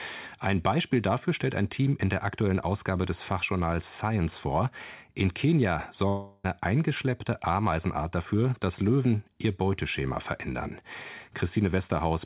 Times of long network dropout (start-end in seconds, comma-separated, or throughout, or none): 6.08-6.47